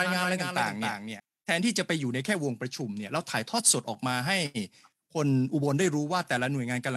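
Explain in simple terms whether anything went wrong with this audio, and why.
Right from the start until 1.2 s there's a doubled audio track: a second, quieter copy of the speech trails about a third of a second behind, then cuts off abruptly. That's likely the same sound being picked up twice, once through a slower path.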